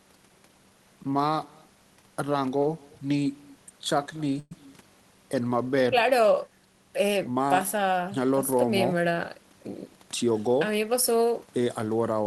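Echo with no canceller runs through the whole clip. The far end is playing the call on a loudspeaker, and its microphone sends that sound back with nothing to remove it. Every phrase returns about a fifth of a second later, roughly 26 dB below the speech, as a faint, thinner shadow. It is quiet enough to sit under the talker rather than compete, but it trails each syllable.

A call audio freeze occurs from 4.39 to 4.52 s. The sound does not drop out. The last moment is held and stretched into a brief buzzy continuation filling about 116 ms, the last roughly 20 ms of it near-silence, before the speech picks up exactly where it left off. Nothing is lost, but a small gap has been inserted, and everything afterwards runs that much later. The likely cause is delayed packets briefly emptying the jitter buffer.

A jitter buffer speed-up follows from 9.35 to 10.48 s. The receiver had built up more buffered audio than it wanted and trimmed it by repeatedly cutting out tiny pitch-period-sized slices. 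About 150 ms disappears over that stretch, so the speech plays at about 110% of normal speed while keeping its pitch. The delivery sounds briefly hurried before settling back to its natural pace.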